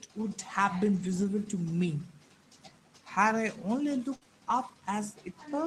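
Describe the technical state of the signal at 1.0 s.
At 1.0 s the signal is inside a lost packet rebuilt from error correction, running from 0.95 to 1.25 s. Packets went missing, and the decoder played the low-bitrate copies carried in the following packets, so about 160 ms of speech comes out rougher and noisier, with no gap.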